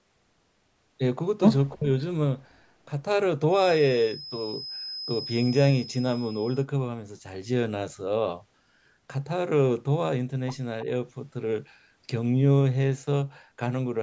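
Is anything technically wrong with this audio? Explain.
Yes, three faults can be heard in this speech.

Speech suppressed in double talk, 1.75 to 1.9 s: the speech dips sharply, by roughly 25 dB, for about 150 ms. The likely cause is an echo canceller that, with both sides talking at once, could not separate the talker from loudspeaker echo and turned both down.

Feedback whistle, 3.48 to 6.67 s: a thin, steady tone near 5.1 kHz sits behind the speech, roughly 15 dB below it and swelling and fading slowly in level. This likely comes from a loudspeaker-to-microphone loop held right at the edge of feedback, so one frequency keeps sounding without running away.

Echo leak, 10.8 to 10.85 s: a brief scrap of delayed speech arrives 312 ms after the original, about 30 dB below it. The other side is likely playing the call on a loudspeaker, and its echo canceller let part of what its microphone picked up travel back.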